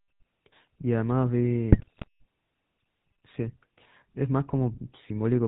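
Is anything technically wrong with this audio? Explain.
Yes. GSM full-rate codec throughout: the vocal tract is modelled and driven by sparse regular pulses, with nothing above 4 kHz, giving plainly audible buzzy, gravelly roughness that fits 13 kbps coding. GSM bit errors from 1.72 to 2.08 s: corrupted filter, pitch and gain values distort frames, so the speech breaks into squawks, pops and gargling, pointing to a weak, error-heavy link.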